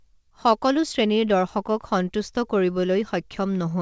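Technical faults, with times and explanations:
Throughout: clock drift between sender and receiver. The sending end's clock runs slow, by something like 5 percent, so audio arrives a bit slower than the receiver plays it out. The jitter buffer keeps running low, and the receiver has to pad the stream with little repeated slivers to avoid going dry. That's why the timing never quite settles. The sound itself stays band-limited at 8 kHz, consistent with a G.722 call path at 64 kbps.
0.24 to 3.77 s: repeated timing corrections. Across nearly the whole clip the receiver keeps stretching things, with short repeats at uneven spacing, all pushing the same way. Net playback runs at about 96 percent speed and adds around 150 ms overall. No single edit is big, so if heard at all, it's as small hiccups and a slightly dragging, unsteady tempo rather than clear glitches. It's the buffer compensating for that slow sender clock.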